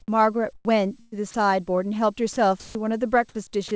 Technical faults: sound dropped by the voice detector; burst of packet loss

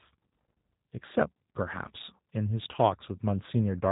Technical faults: G.729 codec

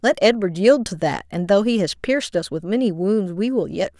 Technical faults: none

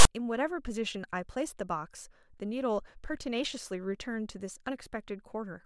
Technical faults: file tags played as audio

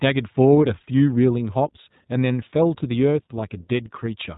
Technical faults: iLBC codec

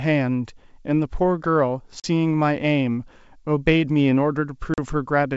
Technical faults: packet loss on an ADPCM call

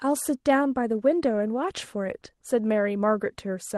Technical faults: none

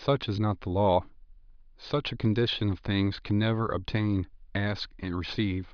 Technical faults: none

